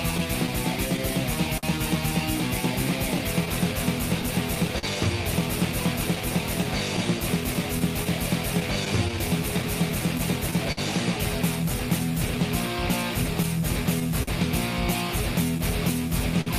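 Clock drift between sender and receiver runs through the whole clip. The sender's clock is slow by roughly four percent, so the receiver's buffer keeps draining, causing uneven tempo wobble and repeated, smeared frames on a spectrogram.

From 0.17 to 1.65 s, scattered short gaps appear: about four lost packets, none longer than about 50 ms. Each is patched by extending the last sound, producing brief ticks and smears that look like stretched, flattened spectral columns.

Repeated timing corrections run from 0.76 to 16.10 s. The receiver plays at 99 percent speed, adding roughly 150 ms in small repeated pieces. These come across as slight hiccups, with the waveform showing duplicated short segments at irregular spacing.

More scattered short gaps come at 3.18 to 4.85 s (about seven, each under about 40 ms) and at 6.15 to 10.79 s (about ten, each up to about 50 ms). They cause the same brief smeared ticks.

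Repeated stalls (stutter) occur from 13.42 to 14.29 s and from 15.58 to 16.48 s, three in each span, with the longest lasting 45 and 52 ms. The buffer ran dry each time, so the sound drags and stutters, with held, fading spectral smears visible between the bursts.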